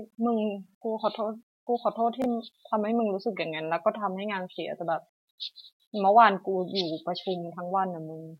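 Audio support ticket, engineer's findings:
Chunks out of order, 2.22 to 2.26 s. Brief jumbled smear in the speech. One 20 ms block arrives a slot late and plays after its successor, giving three hard splices. Nothing lost, just reordered. Probable component: jitter buffer or packet reassembly; the block size fits a 20 ms frame.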